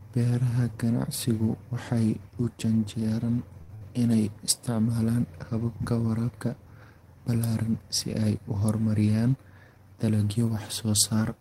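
At 3.61 s, right after "ganacsigu waxay u janjeeraan", a short stall from a late packet holds the sound for 77 ms. Nothing is lost; the speech resumes where it stopped, just later.

From 3.75 to 3.84 s, before "inay isticmaalaan", a burst of packet loss fills 58 ms with a fading continuation. Unlike the stall, 60 ms of speech is actually skipped.

Between 9.67 and 9.99 s, a jitter buffer speed-up cuts roughly 70 ms of pitch periods, so the speech runs at 116% with unchanged pitch and sounds hurried rather than broken.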